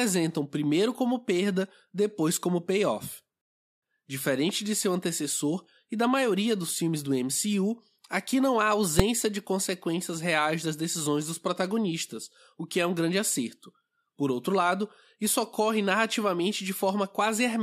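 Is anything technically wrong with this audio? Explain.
Yes. At 8.99 s the speech is broken by a single sharp bang, a click so loud it jumps far above everything around it. This is invalid numbers at full scale: a calculation produced infinite or invalid values, which were forced to the largest possible sample value for one processing block. That block lasts only about 2.67 ms, which fits a 128-sample block, so the pops at its start and end merge into one bang.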